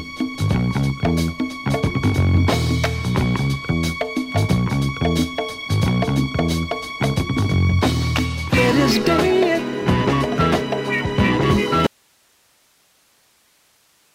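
At 11.87 s the audio drops out to a faint residue and stays that way to the end of the clip. The wanted signal cuts off abruptly, mid-flow, rather than fading or pausing, and what remains is a bed of hiss sitting roughly 40 dB below the previous level. The likely cause is a break in the signal feed upstream while the downstream path stayed live, so the gap carries only the path's own noise.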